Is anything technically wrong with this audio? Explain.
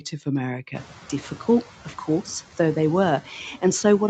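Yes. Throughout the speech you can hear noise suppressor artifacts. The suppressor pulls down the bands it reads as steady noise, by about 7 dB, so the room noise that comes up around half a second in ducks between words and swells under them.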